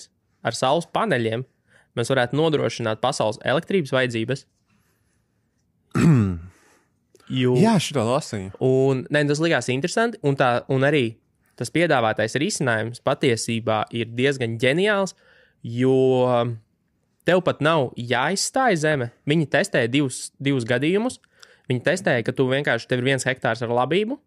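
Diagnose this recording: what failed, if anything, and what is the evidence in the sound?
Nothing here points to a failure at any stage; it's just speech coming through the way it was recorded, with nothing in the sound asking for a closer look.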